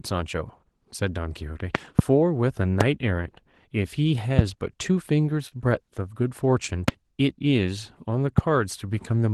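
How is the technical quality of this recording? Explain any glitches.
The recording has two kinds of fault: four loud pops and one short stall from a late packet.

Loud pops occur at 1.75–2.01 s (two in quick succession), 2.81–2.83 s, 6.88–6.91 s and 8.38–8.41 s. They are likely caused by sudden voltage pulses, from a plug, switch or static, added to the signal. They are sharp and far louder than the speech, which continues underneath.

A short stall from a late packet occurs at 5.48–5.53 s. A packet arrived late and the jitter buffer ran dry, so the receiver stretched the last sound for 34 ms and then resumed where it left off. Nothing is lost, but that sound is briefly held, with a faint buzz or dip.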